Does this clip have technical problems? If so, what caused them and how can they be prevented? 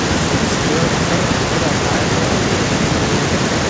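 No, the speech shows no technical faults, and its band ends at 8 kHz, which fits a WebRTC call path using G.722 at 64 kbps.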